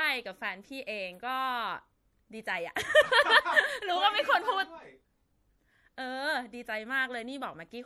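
Across the whole speech clip there is plainly audible damage, likely from MP3 compression. The treble is cut off and the top end sounds dull. Weak high detail flickers on and off, giving a watery, swirling texture. S sounds chirp metallically. The damage fits a bitrate around 64 kbps.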